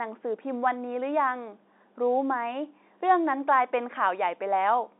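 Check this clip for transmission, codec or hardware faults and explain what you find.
I found no transmission, codec or hardware faults in this clip.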